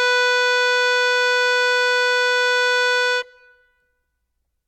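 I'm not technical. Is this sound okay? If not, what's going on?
Yes, the music sounds fine, with no faults to hear anywhere in it.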